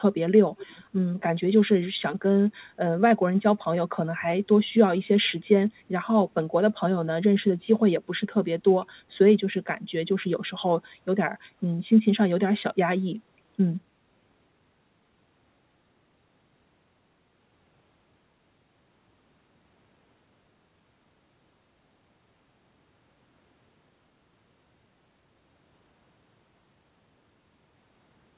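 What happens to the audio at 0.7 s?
At 0.7 s you're hearing an echo leak, running from about 0.58 to 0.84 s: a faint copy of the speech coming back roughly half a second behind the original, sitting well below the main voice. The likely cause is the far end playing the call over a loudspeaker, with its echo canceller letting a scrap of what its mic picked up slip through and get sent back down the line.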